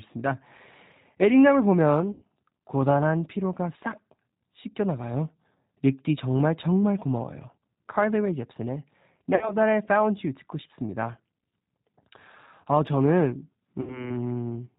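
Throughout the clip, the speech carries plainly audible damage from the G.729 codec, a low-rate telephony coder that fits an 8 kbit/s G.729A stream. Nothing above 4 kHz survives, so the speech sounds band-limited and muffled. The coder rebuilds each short frame from a vocal tract filter, a pitch predictor and a few pulses, not from the waveform itself, which gives the speech a slightly rough, synthetic texture.

Three dropouts follow, each marked by VoIP packet loss concealed by the speech codec. The first, at 2.12–2.23 s, covers about 100 ms of lost audio, which fits five missing packets. The second, at 9.35–9.54 s, and the third, at 13.81–14.16 s, each cover about 60 ms, which fits three packets apiece. In each gap the decoder repeats its last pitch and filter state at falling gain, so the speech smears into a buzzy tone or coloured noise that fades. Because each frame depends on the one before, the speech stays weak or distorted for a short time after the audio resumes.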